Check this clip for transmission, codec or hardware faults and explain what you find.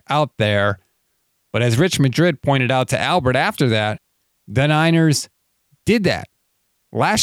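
One hardware-side fault is present: an electrical switching spike at 2.82 s. A single sharp snap lasting about a millisecond sits on top of the speech and peaks at about -20 dBFS. It is an isolated transient, not a dropout, so nothing underneath is lost. The likely cause is a nearby switch, motor or static discharge producing a brief arc, which the audio wiring picked up as an impulse added to the signal.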